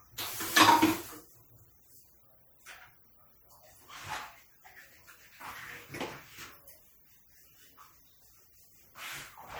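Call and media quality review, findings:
MP3 compression, whole clip: watery, swirly texture with metallic chirps on bright sounds and smeared attacks. Likely cause: starved encoder zeroing weak frequency lines frame to frame, damage level fitting roughly 64 kbps. Continuous swirl, no gaps, unlike packet loss.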